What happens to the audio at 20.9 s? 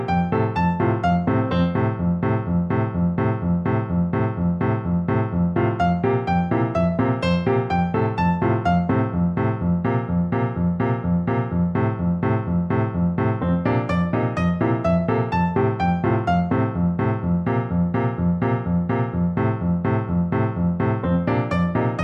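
Nothing goes wrong at 20.9 s; the audio plays through that moment intact, with no dropout, click or distortion.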